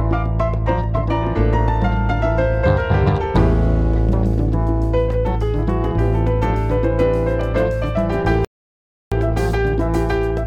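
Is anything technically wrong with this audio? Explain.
Yes. At 8.45 s the sound halts abruptly and stays silent until 9.12 s, a gap of about 0.67 s. This is a playback stall, likely from the player's buffer running dry or its output thread being blocked, so nothing reached the output until it recovered.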